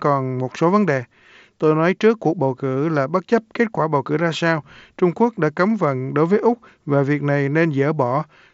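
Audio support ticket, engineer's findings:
Nothing to flag here; the speech comes over the Bluetooth mSBC headset link with its usual wideband limit around 8 kHz, and I couldn't find a fault anywhere in it.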